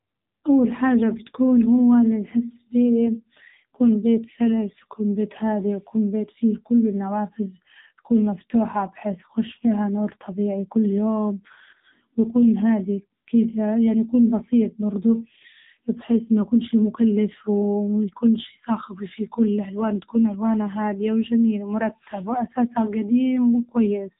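Throughout, the speech sounds buzzy and synthetic, with nothing above 3.8 kHz: heavy AMR narrowband mobile codec damage, consistent with a rate near 6.7 kbps.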